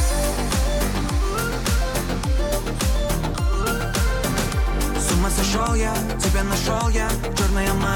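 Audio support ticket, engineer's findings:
No faults found; nothing audible to attribute to any component.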